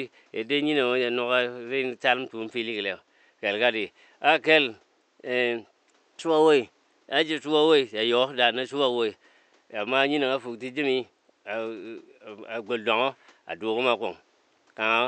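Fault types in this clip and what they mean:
No faults detected; nothing in the signal path audibly disturbs the speech.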